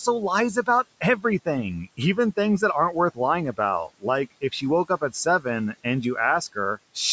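Speech clip with speech cut by the noise suppressor at 1.01–1.24 s and 4.88–5.45 s. Quiet parts get mistaken for noise and pulled down about 13 dB, sounding swallowed.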